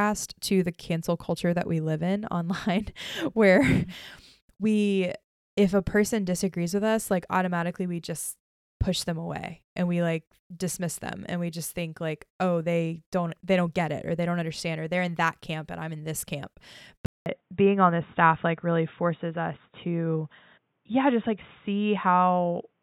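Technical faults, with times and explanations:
17.06 s to end, input switched to a poorer device: after a 200 ms silence, speech turns dull, with nothing above 3.8 kHz. Likely a narrower-band microphone took over.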